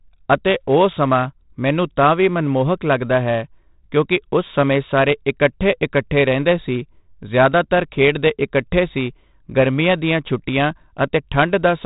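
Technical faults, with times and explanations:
Throughout: 4-bit ADPCM compression. Each sample of the speech is coded as a coarse 4-bit step from a predicted value, so a gritty hiss rides on every loud passage and rises and falls with the level. Sharp onsets distort where the adaptive step size lags behind the jump. The damage is heavy and fits a 32 kbps stream. Nothing sounds above 3.8 kHz, which points to a sample rate near 8 kHz and leaves the speech dull.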